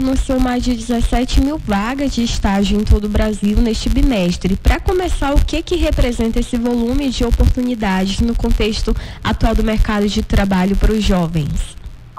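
All the way through there's a buzz at about 93.8 Hz tracking the level: filter restarted on every block, ticking at each reset, which fits a 512-sample block.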